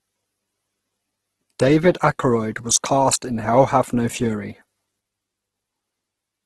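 A speech recording that has likely passed through Opus compression at a very low bitrate, which fits something around 12 kbps in the codec's music mode. Starved of bits, the encoder fills bands by folding and noise, so across the whole clip the speech sounds rough, grainy and noisy rather than clean, with heavy damage throughout. The bandwidth has also been cut, with nothing above about 12.1 kHz, which takes the top air off sibilants.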